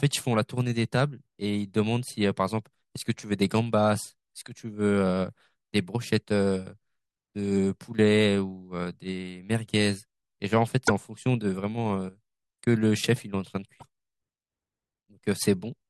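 At 10.86 to 10.90 s and 13.79 to 13.83 s the speech jumps ahead with a brief chirp, noise burst or short gap, roughly two 24 ms frames long, showing as a broadband smear or gap in the spectrogram and a waveform discontinuity. The likely cause is a broken MP3 bit reservoir after dropped frames.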